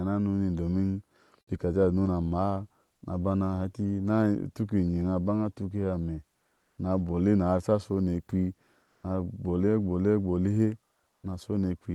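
In this speech recording, three short pauses have their real background replaced by comfort noise: 6.55–6.77 s (220 ms, same level), 8.85–9.03 s (180 ms, about 4 dB louder) and 11.09–11.23 s (140 ms, about 2 dB quieter). Unlike a noise gate or dropout, the pauses never fall silent. The real background gives way to a smooth, featureless hiss, likely from Opus discontinuous transmission synthesising the background while the sender stays quiet.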